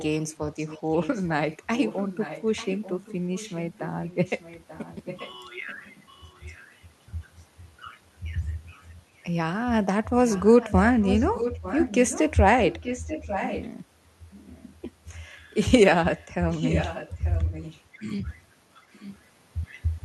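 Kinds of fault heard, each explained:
Echo leak: A delayed copy of the speech returns about 0.89 s behind the original, likely because a loudspeaker's echo canceller at the far end let some through. It comes and goes across the clip, loudest near 10.27 to 12.2 s, at times barely audible.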